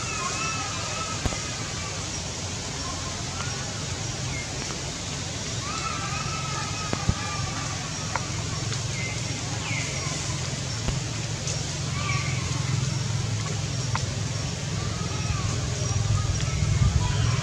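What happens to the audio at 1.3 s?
A loud pop lands between 1.26 and 1.35 s. Two sharp pops arrive in quick succession, far louder than the surrounding sound, which carries on underneath. The likely cause is a sudden voltage step or pulse, such as from a plug, switch or static discharge, added to the signal.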